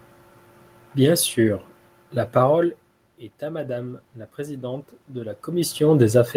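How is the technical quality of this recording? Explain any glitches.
There is one glitch in the recording: automatic gain rising, from 3.39 s to 5.83 s. The speech level at the microphone fell by about 12 dB, and the automatic gain control responded by slowly raising its gain by about 7 dB over roughly two and a half seconds. You hear the speech gradually swelling back up, and the room noise underneath rises right along with it. That shared swell is what separates it from the talker moving, heard around 2.5 s and 5.5 s, where only the voice changes and the background stays put.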